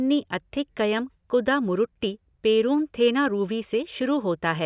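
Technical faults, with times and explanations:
Nothing stood out on listening to this speech recording.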